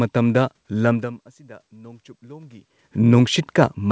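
From 0.9 s to 2.74 s the automatic gain rises. The level at the microphone falls by about 24 dB, consistent with the talker moving away around 1.0 s, and the gain control slowly adds about 4 dB to compensate. Because the gain acts on the whole signal, the voice and the room noise swell together over nearly two seconds, a gradual lift rather than a step. The band stops at 8 kHz, which fits a G.722 call path.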